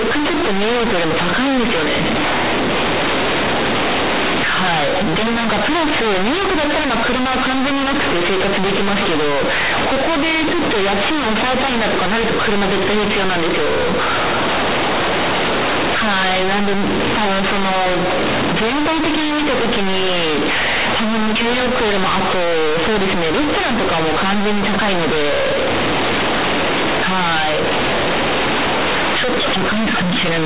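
From start to end the speech is harshly loud and buzzy, with heavy noise in pauses: companded audio read as linear, A-law telephone bytes played as plain 8-bit samples without expansion.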